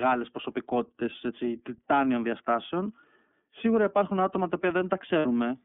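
Throughout, the speech carries the iLBC codec's narrowband signature. The line passes roughly 200 Hz to 3.5 kHz, and the codec damage is plainly audible as a rough, slightly synthetic texture. Each 30 ms frame's excitation is coded independently, which fits iLBC's 13.33 kbps mode.

From 5.19 to 5.26 s, lost iLBC frames leave a 60 ms gap, consistent with two missing 30 ms frames. The decoder fills it by repeating the last pitch cycle mixed with noise, heard as a briefly held, buzzy vowel. Because frames stand alone, the voice recovers immediately afterwards.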